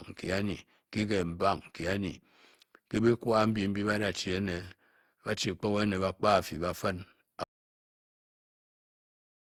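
From the start, the speech carries generation loss: a swirly, hollow, smeared character, with consonant attacks blurred and soft. This likely comes from the audio passing through an Opus encoder at 64 kbit/s about seven times, each pass requantising on a shifted frame grid so errors and gaps pile up. On a spectrogram the harmonics look blotchy and patchy, with nothing above 20.2 kHz.

At 7.44 s the sound cuts out in mid-flow: an audio dropout to silence that lasts to the end, about 2.2 s. The gap is silent with no room tone, most likely because the input was lost (a disconnected device, failed link or accidental mute) while the recorder kept writing silence. The waveform drops abruptly to a flat line, and the spectrogram goes completely empty.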